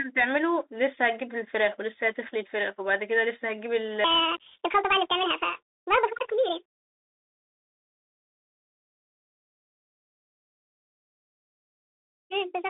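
A Bluetooth CVSD headset codec runs throughout, coding the speech one bit per sample, which fits a 64 kbps link. The speech sits in a narrow 300 Hz to 3.7 kHz band with nothing above 3.8 kHz, and its adaptive step lags loud, fast changes, giving scratchy sibilants and a grainy hiss underneath.

From 4.04 s to the end, a section at the wrong speed plays 1.64 times too fast, likely from being run against the wrong clock. Pitch and pace rise together, so the speech sounds hurried and roughly ten semitones higher.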